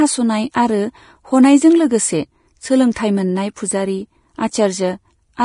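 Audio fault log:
Throughout, heavy Vorbis-style compression damage, likely from lossy encoding at a low rate that fits roughly 30 kbps: the speech sounds hissy and grainy, with smeared consonant onsets. The encoder has discarded everything above 10.6 kHz and replaced fine treble detail with coarse noise of similar energy. On a spectrogram, energy stops at a hard ceiling near 10.6 kHz, and the upper band shows blotchy, patchy texture instead of clean harmonic striations.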